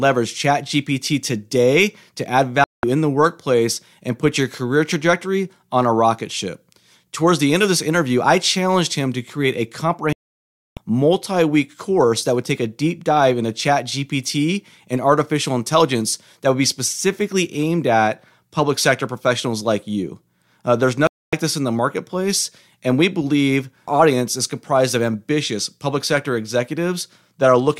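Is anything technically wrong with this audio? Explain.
Yes. The speech drops to silence three times: after "today to add" at 2.64 s for about 0.19 s, returning at "in the workplace and"; after "him to create a" at 10.13 s for 0.64 s; and after "like you uh there's" at 21.07 s for 0.26 s, resuming at "this in the marketplace". This is a digital broadcast dropout: the receiver lost the signal or rejected corrupted frames and muted until valid ones returned. The gap lengths fit runs of 32 ms frames, and the audio in them is gone.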